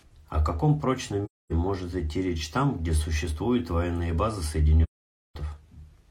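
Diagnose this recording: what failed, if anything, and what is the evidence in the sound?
Codec stage: AAC frame loss with muting. The decoder zeroed missing frames, so the sound fades into silent holes of 0.26 s at 1.24 s after "каком прочном" and 0.52 s at 4.83 s after "где существуют военные базы".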